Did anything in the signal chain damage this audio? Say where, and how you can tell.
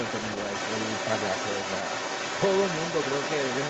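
Yes. The fault sits in the call processing stage: a second voice, the other side's voice leaking through, runs under the talker for the whole clip, from 0 to 3.7 s. It is only a few dB below the main speech, so it is clearly audible throughout. The likely cause is the echo canceller failing to subtract the loudspeaker playback from the microphone, leaving the far end's audio in the outgoing signal, already band-limited to 8 kHz by the Opus call path.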